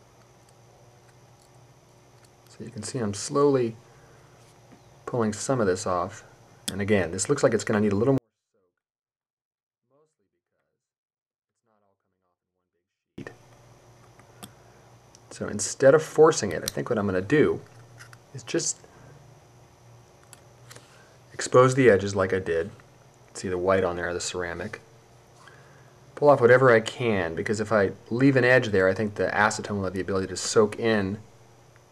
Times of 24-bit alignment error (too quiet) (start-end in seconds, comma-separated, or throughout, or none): 8.18-13.18